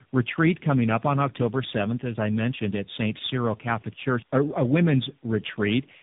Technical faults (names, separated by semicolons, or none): tandem speech coding